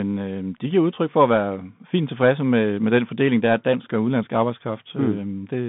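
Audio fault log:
Throughout, Bluetooth CVSD headset codec: the speech sits in a 150 Hz to 3.6 kHz band with nothing above 3.8 kHz. The one-bit up/down coding, which fits a 64 kbps stream, adds granular hiss and scratchy, overloaded s sounds that clean telephone band-limiting lacks.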